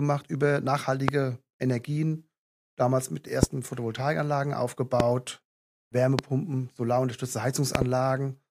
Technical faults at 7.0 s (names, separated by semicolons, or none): none